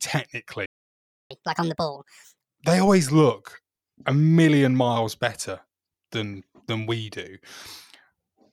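At 0.66 s the speech cuts to silence for about 0.65 s, until 1.31 s. This is a playback stall, likely the player starving for data or its thread being blocked. From 1.31 to 2.60 s comes catch-up at higher speed: the backlog is resampled at 1.5 times normal rate, lifting the pitch by roughly seven semitones before it settles back. At 2.87 s, just before "look a million miles", a DC step shifts the waveform's zero line, heard as a low thump that dies away as the offset decays through a roughly 2 Hz high-pass.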